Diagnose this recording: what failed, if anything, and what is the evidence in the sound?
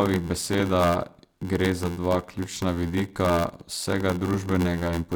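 Block size mismatch (padded) at the buffer. An 86.1 Hz buzz and 0.861-speed speech run throughout. Short zero-filled blocks fit 512-sample reads.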